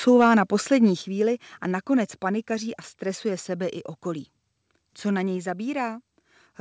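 At 1.02 s the call software likely judged the microphone too loud and cut its input volume in one step: a microphone volume stepped down. Speech and background drop abruptly by about 6 dB and stay there, through a call codec passing nothing above 8 kHz.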